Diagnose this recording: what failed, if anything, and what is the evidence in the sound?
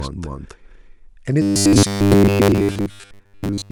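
The speech has been mixed in twice, most likely because a second, slower capture path or a misaligned edit left two copies in the session. Throughout the recording, a full-band duplicate trails the original by roughly 300 ms at about the same level, so every syllable repeats as a hard, dry second onset. A room reflection would decay and colour the sound, but this copy is a clean replica. This is a doubled audio track.

From 1.42 s to the end, the buffer stage is starved, likely because the driver delivers new data too rarely, so playback keeps looping the last fragment. Each fragment is 10 ms long, which imposes a steady 100 Hz buzz on the speech. Most of the real audio, roughly two-thirds or more, is skipped and replaced by repeats, which leaves a rigid, metallic tone that only loosely tracks the syllables. This is robotic sound from repeated short buffers.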